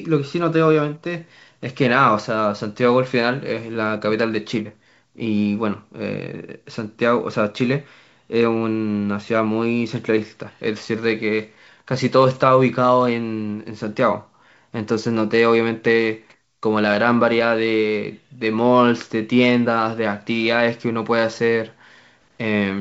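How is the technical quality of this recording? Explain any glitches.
No glitches can be heard in the recording. It carries the sound of G.722 wideband telephone coding at 64 kbit/s, with speech reaching up to about 7 kHz and at most a faint hiss in the upper band.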